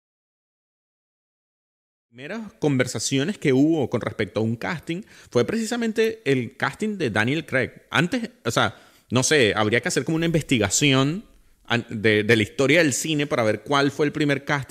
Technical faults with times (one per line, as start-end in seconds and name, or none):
none